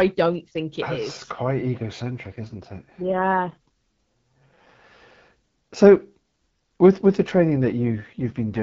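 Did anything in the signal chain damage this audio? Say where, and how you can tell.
Yes, there's an AMR rate drop, twice. From 2.23 to 5.02 s, and again from 7.50 s right after "with with the" through 8.61 s, the speech turns rough and raspy while the bandwidth stays the same and nothing drops out. That's the network stage: on a weak radio link it told the AMR-WB codec to step down, and the sound points to something like 12.65 falling to 6.6 kbit/s, with the freed bits going to error protection.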